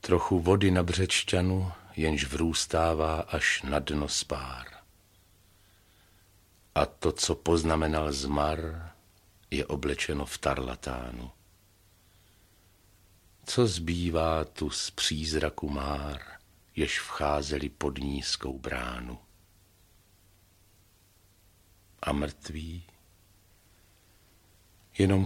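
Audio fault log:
18.51–18.65 s, one channel drops out: for about 0.14 s the level takes a sudden dip of about 6 dB and then snaps straight back, with nothing fading in or out around it. That's the signature of one side of a stereo pair likely vanishing briefly: whatever both channels shared loses half its contribution once they're summed to mono, so it simply drops by roughly 6 dB, and anything carried only on the lost side disappears for that stretch.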